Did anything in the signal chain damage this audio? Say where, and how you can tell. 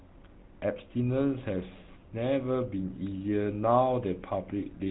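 Yes. The damage happens at the codec stage and runs through the whole clip: this speech has been through a GSM full-rate codec. Nothing reaches above 3.9 kHz, so sibilants are dull. The voice has a plainly audible buzzy, gravelly roughness, consistent with a 13 kbps full-rate coder. The codec keeps a vocal-tract filter and replaces the excitation with a sparse, regularly spaced pulse train. That coarse excitation is what you hear as the rasp.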